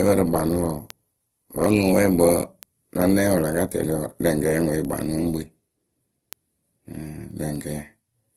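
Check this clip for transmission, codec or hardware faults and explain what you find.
Two faults are audible in this speech: a layered codec sound throughout and a steady train of ticks.

Transcoding between lossy codecs runs throughout. Nothing reaches above 15.6 kHz. Smeared, swirly artefacts sit on top of a second, grainier texture. That combination fits an AAC-style encode that was likely later re-encoded to low-bitrate Opus. On a spectrogram, the top edge is flat and hard, with patchy, blocky detail below it.

Word clock ticks run from 0.17 s to 8.30 s, about every 0.3 s, roughly thirty in all. The receiving device's clock drifts against the sender's by around 100 ppm. At each slip a sample is dropped or repeated, giving a sharp tick of uneven strength. Each appears as a brief spike in the waveform and a thin vertical line on the spectrogram.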